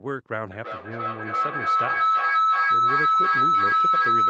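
From 0.51 s to the end, a feedback howl builds near 1.5 kHz with repeats roughly every third of a second, rising to about 10 dB above the speech. Unlike an echo, which fades with each repeat, this loop regains level on every trip.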